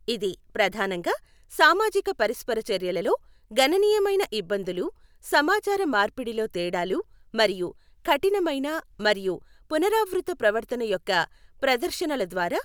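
No technical faults can be heard anywhere in the recording.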